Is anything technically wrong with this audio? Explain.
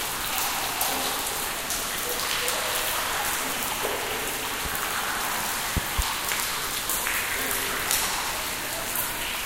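Yes, there are two loud pops. Loud pops at 4.65–4.77 s and 5.77–6.02 s, each a quick double pop, likely from a sudden voltage step such as a plug, switch or static discharge. Each stands well above the sound, the second noticeably louder, while the audio carries on underneath.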